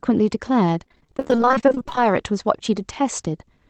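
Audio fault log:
0.83–1.98 s: repeated packet loss (robotic sound). Forty-four short dropouts, none longer than about 22 ms, each filled by stretching the preceding sound. Concealment covers 44% of the stretch, so the audio turns choppy, with fragments missing between patched pieces.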